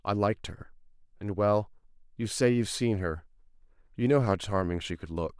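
No technical faults are audible.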